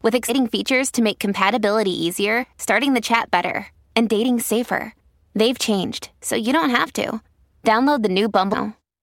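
Speech with three brief glitches at 0.28 s, 2.42–2.44 s and 8.52–8.55 s from damaged data in a compressed stream, where corrupted frames desync the decoder.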